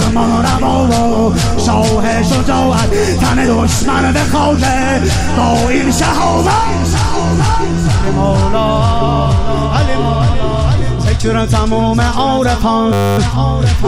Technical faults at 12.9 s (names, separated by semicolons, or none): system hang loop